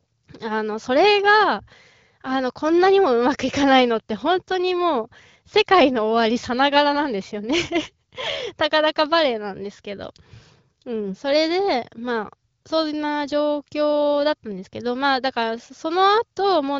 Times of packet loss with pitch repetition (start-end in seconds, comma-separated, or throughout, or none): none